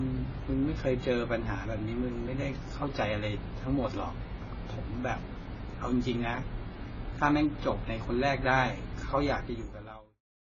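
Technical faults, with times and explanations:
Throughout: AAC compression, likely at about 16 kbps. Heavy coding damage leaves the speech dull and warbly; the spectrogram shows nothing above 7 kHz.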